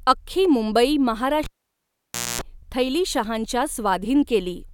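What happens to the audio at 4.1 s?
At 4.1 s the audio is intact, with no dropout, click, distortion or other fault.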